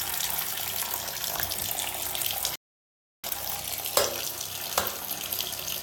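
At 2.56 s the sound drops to silence for about 0.68 s, a rebuffering stall. The player ran out of downloaded audio and halted until more arrived, then resumed at 3.24 s exactly where it stopped. Nothing is missing, but 682 ms of dead air is inserted. On a waveform this is a flat gap. On a spectrogram it shows as a blank vertical band.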